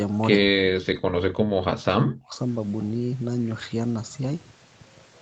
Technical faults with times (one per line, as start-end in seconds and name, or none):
1.53-2.37 speech suppressed in double talk